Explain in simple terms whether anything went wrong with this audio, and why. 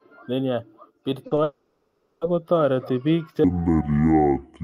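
Three things go wrong in this speech clip.

First, there is short concealed packet loss. Around 1.27 to 1.33 s, and again at 1.35 to 1.39 s, tiny bits of audio arrived too late. The player patched each gap by stretching the previous sound. You hear a quick smear or wobble.

Next comes a long network dropout. From 1.43 to 2.23 s, almost a second of audio never arrives, likely because the connection stalled. The player keeps extending the last sound for that whole stretch as a fading buzz or hiss. Then speech resumes with "kotareti bik che", and the lost part is gone.

Finally, there is a section at the wrong speed. After "kotareti bik che", from 3.44 s to the end, playback runs at about 0.6 times normal speed. The voice drops roughly ten semitones, becoming deep and slow. Playback was likely tied to the wrong clock.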